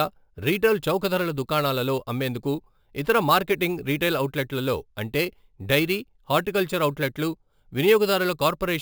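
Throughout the speech runs imaging from sample-and-hold upsampling. Samples were repeated without smoothing, mirroring the spectrum into 8 to 16 kHz at about 19 dB down, which fits a 16 kHz source. Unlike steady hiss, this metallic fizz swells with the speech and glides opposite to its pitch.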